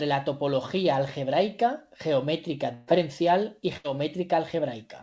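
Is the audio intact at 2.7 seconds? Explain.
No. Just after "la topología algebraica geometría", from 2.74 to 2.89 s, the speech stops moving forward: the last sound is stretched out and fades for about 134 ms, and then the speech picks up again further along. This is a burst of packet loss. Several consecutive packets never arrived in time, so the receiver filled the gap by extending and attenuating what it had last played. Roughly 140 ms of the original speech is missing as a result.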